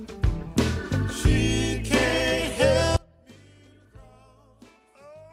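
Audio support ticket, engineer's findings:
Audio dropout to a faint residue from 2.97 s to end. Abrupt cut, only faint sound left, about 30 dB down. Likely signal path lost mid-stream, downstream stage still live.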